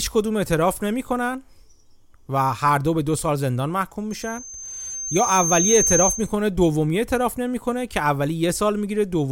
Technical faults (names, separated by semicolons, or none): loudspeaker feedback squeal